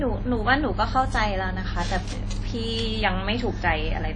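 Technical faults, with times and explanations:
Throughout, WMA compression: the speech sounds ringing and washy, with hiss that rises and falls with it and nothing above 10.1 kHz. This likely comes from a low-bitrate transform codec near 32 kbps. A spectrogram shows a hard ceiling and blotchy, time-smeared gaps.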